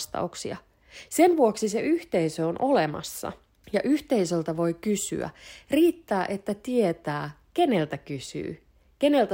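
No technical faults can be heard anywhere in the recording, and the signal stays intact and continuous throughout the speech.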